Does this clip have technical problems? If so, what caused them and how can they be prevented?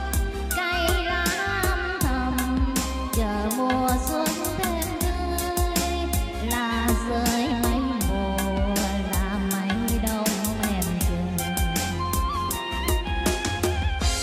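No, nothing stood out as a technical problem on listening, so there is nothing here that needs a cause or a fix.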